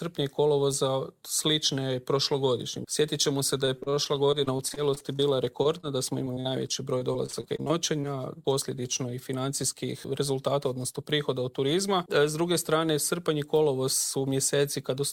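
From 3.65 to 8.05 s the audio breaks up with repeated packet loss, giving a robotic sound. Packets kept going missing or arriving late, 31 holes in all, none longer than 40 ms. Each was patched by stretching the preceding sound, so about 14% of this span is concealment. It sounds choppy and robotic, with small pieces gone. On a spectrogram, short smeared or frozen slices repeat through the stretch. The waveform shows brief flattened or copied segments and small dropouts.

Between 9.73 and 10.31 s a jitter buffer speed-up occurs. The buffer held more audio than its target, so the receiver cut short pitch-period-sized pieces, a few tens of milliseconds in total, to catch up. Playback runs at about 105% speed with unchanged pitch, sounding slightly hurried. A spectrogram shows harmonics at the same height but events packed closer in time. The waveform has tiny splice points where periods were dropped.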